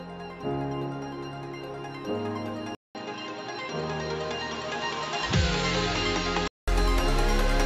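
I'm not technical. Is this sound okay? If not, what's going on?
No. From 2.75 s to 6.68 s the sound dulls and drops slightly in level after a 200 ms gap, likely an input switched to a poorer device cutting everything above 7.6 kHz.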